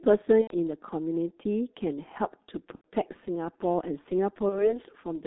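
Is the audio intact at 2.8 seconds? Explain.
No. From 2.75 to 2.89 s there is VoIP packet loss concealed by the speech codec. About 90 ms of audio went missing, which fits three lost 30 ms frames. The decoder kept repeating its last pitch and filter with falling gain. The gap turns into a fading buzzy tone or coloured noise, and the sound stays weak briefly after.

The G.723.1 codec shapes the whole clip, including this moment. Its band runs only from 250 Hz to 3.7 kHz. Heavy coding damage, consistent with roughly 6.3 kbit/s, makes the speech muffled and hoarse, with smeared consonants.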